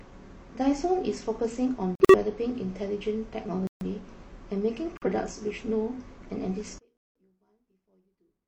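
At 1.95, 3.67 and 4.97 s the speech drops into sudden dead silence for about 0.19, 0.19 and 0.1 s: corrupt frame muted, where the decoder rejected damaged frames and the player filled the gap with nothing. From 6.78 s to the end the voice nearly vanishes, about 38 dB down, likely one channel inverted and cancelling in a mono sum. Another muted hole lands inside that stretch at 6.99 to 7.20 s.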